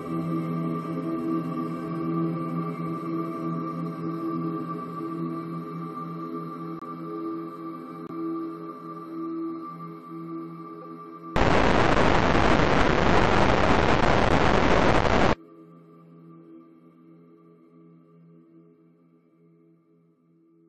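At 6.79 s the sound drops out abruptly for 24 ms, until 6.82 s. This is a corrupt frame muted. Bits in the compressed stream were damaged. The decoder rejected the frames, and the player filled their slot with silence. This gap points to several short frames lost together. A second hole opens at 8.07 s and lasts 32 ms, to 8.10 s, which fits a single longer frame. In both cases the silence starts with no fade, and the audio resumes on time.

At 10.82 s there is a brief burst lasting 30 ms, to 10.85 s. This is a corrupt frame decoded. Here the damaged frame was not rejected. The decoder played it anyway, reading its corrupted gains and codes as if they were valid. That puts energy at the wrong frequencies for roughly one frame's length. It comes through as a short glitch of misplaced sound, peaking at about −30 dBFS.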